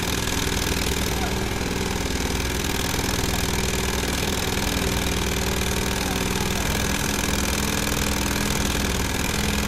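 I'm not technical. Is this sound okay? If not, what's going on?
No. At 7.75 s the sound freezes for well under a millisecond. This is an underrun with held sample: playback briefly ran out of audio, the output held its last level flat, and the sliver of sound missed meanwhile was lost.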